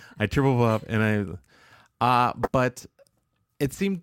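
At 2.43 to 2.48 s, a corrupt frame was decoded. Flipped bits in a few compressed frames put energy at wrong frequencies, heard as a brief squeaky burst.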